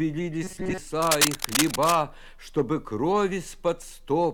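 From 0.43 to 0.79 s, the sound turns into a rigid, metallic buzz at 188 Hz. This is robotic sound from repeated short buffers. The likely cause is audio arriving too late, so a slice of about 5.3 ms was looped in place of most of the real signal.

From 1.02 to 1.96 s, dense, uneven bursts of scratching and rustling sit over the sound. This is cable scratch noise, roughly as loud as the sound itself. A worn cable or connector being moved is the likely cause.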